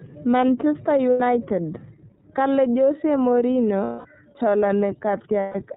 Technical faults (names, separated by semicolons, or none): iLBC codec; lost iLBC frames